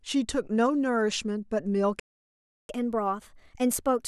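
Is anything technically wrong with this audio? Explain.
Yes, there are two faults, a playback stall followed by catch-up at higher speed.

From 2.00 to 2.69 s the speech cuts off mid-flow for about 0.69 s, likely because the player ran short of data or was blocked. The waveform drops to near silence, and the spectrogram shows a blank vertical gap.

From 2.69 s to the end the player races through its backlog at 1.15 times normal speed by resampling, so the speech sounds hurried and raised by about two semitones. On a spectrogram the harmonics sit higher and more widely spaced than before the gap.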